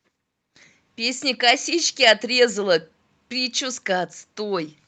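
No technical faults can be heard anywhere in the speech recording, with the signal holding steady throughout.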